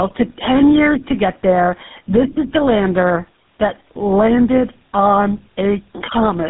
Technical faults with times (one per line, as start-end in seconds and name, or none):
0.00-6.50 gain pumping
0.00-6.50 tandem speech coding